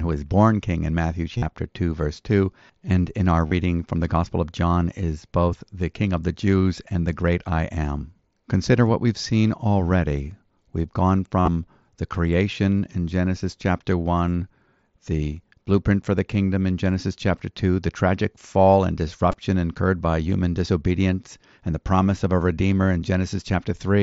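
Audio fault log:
1.38 to 19.34 s, concealed Bluetooth headset packet loss: four short dropouts at 1.38–1.42 s, 3.47–3.52 s (after "and in our"), 11.41–11.48 s (before "the creation in", longest run about 52 ms) and 19.32–19.34 s (after "the tragic fall and"). The receiver filled each gap by repeating recent waveform, so you hear a brief buzzy hold and a slight warble as real audio returns, on top of the mSBC link's light graininess.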